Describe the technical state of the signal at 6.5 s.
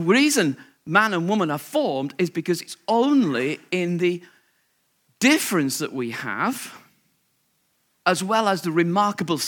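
At 6.5 s the speech signal is intact, with no technical fault at that moment.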